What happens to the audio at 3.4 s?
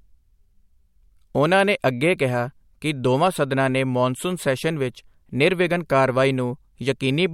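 Nothing goes wrong at 3.4 s; the speech carries on intact through that moment with no dropout, glitch or distortion.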